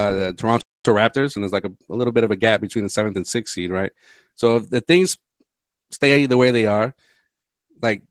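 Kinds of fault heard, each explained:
Opus voice compression: Throughout, the speech sounds muffled, hoarse and a little robotic. That points to Opus coding at a low bitrate, around 16 kbps in its hybrid mode, with a SILK linear-prediction core and only coarse detail coded above 8 kHz.
Playback stall: The speech cuts to silence from 0.61 s to 0.85 s, a gap of about 240 ms, then picks up again. The likely cause is the player running out of data or its thread being blocked, which leaves the output empty until it recovers.
Time-compressed catch-up: From 0.85 s to 3.23 s the speech is hurried, at about 1.1 times normal speed, with the pitch unchanged, ending before "sixth seed right". The player is trimming its backlog by cutting out small pieces and cross-fading across the joins.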